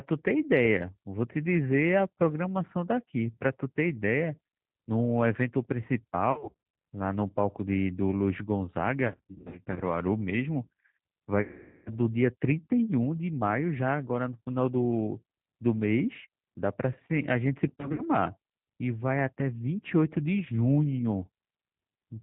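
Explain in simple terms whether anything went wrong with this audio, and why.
The whole recording sounds slightly rough, thin and artificial, with no crisp high end. That is the G.729 codec, a low-data phone-call format that rebuilds speech from a simplified model.

At 6.32 to 6.54 s, 9.08 to 9.87 s, 11.42 to 11.90 s and 17.68 to 18.03 s, the speech turns buzzy, smeared and fading. This is VoIP packet loss concealed by the speech codec. Pieces of the call went missing, and the decoder stretched out the last sound it had to fill the gaps.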